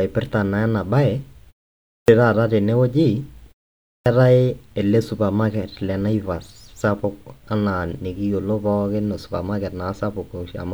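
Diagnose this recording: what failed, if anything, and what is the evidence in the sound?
Playback: clipped start after a pause at 1.92 s and 3.9 s, where the dozing output device wakes about 160 ms late, chopping off the onsets.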